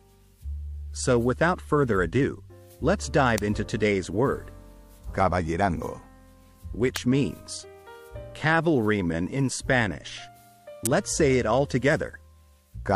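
A brief electrical arc, likely from a nearby switch or motor, was picked up by the audio line three times. Each electrical switching spike lands as a sharp, isolated snap over the sound, at 3.38, 6.96 and 10.86 s, peaking at about -5, -10 and -5 dBFS.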